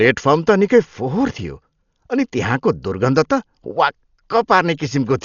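From start to finish the speech is dull and cut off, with nothing above 6.9 kHz, and a rough, fluttering noise clings around voiced tones. This heavy damage is likely Dolby Digital compression at a rate that fits about 40 kbps. The noise filling emptied bands sets it apart from a simple low-pass filter.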